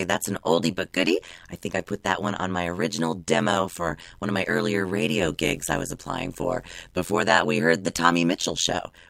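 From start to finish the speech carries an overlap-add ripple. The signal was split into windowed frames and reassembled with an overlap whose windows do not sum to a constant gain, so the level dips and recovers once per frame. Here the swing is deep, about 60 dB, and repeats at around 100 Hz, producing a harsh, metallic buzz that adds extra tones around the speech throughout.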